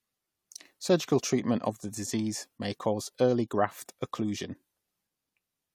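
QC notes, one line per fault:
No faults heard anywhere in this recording.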